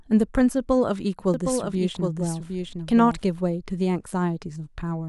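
A doubled audio track runs from 1.34 to 3.54 s: a full-band copy of the speech trails roughly 0.7 s behind, about 5 dB quieter, with no decay or room colour, starting and stopping abruptly, likely from a second, slower capture path.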